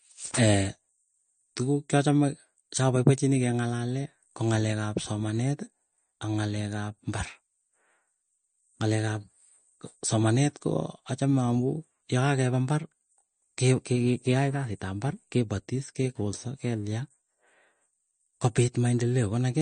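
From start to finish the speech carries plainly audible MP3 compression damage, likely from encoding at a low bitrate, which fits roughly 40 kbps. Short of bits, the encoder has discarded everything above 9.1 kHz, so the top end sounds dull and clipped off. Quieter spectral detail drops in and out between frames, giving a watery, swirling texture, with metallic chirping on sibilants and softened, smeared consonant onsets.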